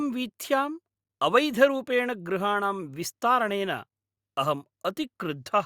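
Nothing technical goes wrong anywhere in this speech recording, so there's no fault to point to at any moment.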